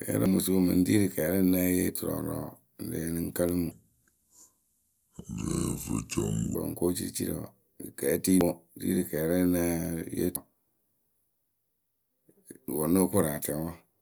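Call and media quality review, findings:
Brief glitches at 0.26, 8.41, 10.36 and 12.68 s. Damaged data in a compressed stream: corrupted bytes in the encoded stream; decoder misreads or rejects the affected frames, loses sync and resyncs on the next frame header. Component: transport or storage of the encoded stream.

Speech from 3.71 to 6.55 s is slowed to 0.647x, deep and dragging, roughly seven semitones low, pitch and tempo falling together. Section at the wrong speed: likely playback or edit clocked at the wrong rate for this span. Component: resampling or clock handling in the player or editor.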